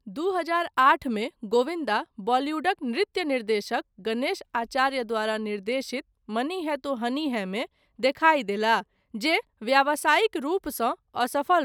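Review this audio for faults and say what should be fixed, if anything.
Nothing needs fixing, as the signal shows no audible technical faults at any point.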